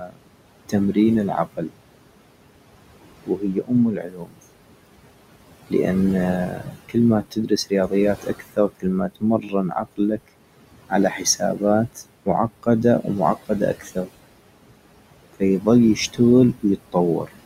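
Throughout, noise suppressor artifacts are present: the room noise, sitting about 13 dB under the speech, is pulled down by about 21 dB between phrases and returns beneath them. That pumping of the background, not any loss of the talker, is what sets it apart. Separately, speech is cut by the noise suppressor at 0–1.82 s, 3.26–4.4 s, 6.48–10.29 s, 10.89–14.09 s and 15.33–17.29 s, where quiet consonants and word endings, from 0.4 s to about a second in each span, drop by about 19 to 22 dB and sound swallowed.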